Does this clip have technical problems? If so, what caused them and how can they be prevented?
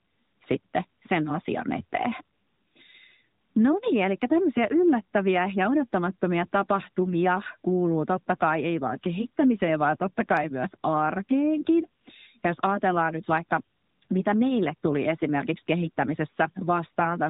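Yes. Throughout the speech, nothing above 4 kHz comes through, and the coding damage is plainly audible as a synthetic, modelled quality. This is the AMR narrowband mobile codec (AMR-NB), which samples at 8 kHz and rebuilds speech from a vocal tract model driven by a pitch predictor and a handful of pulses in each 5 ms block. The amount of damage fits a mid-rate mode of about 10.2 kbps. To prevent it, record or route the call over a wideband path, or capture the audio locally before it reaches the mobile network.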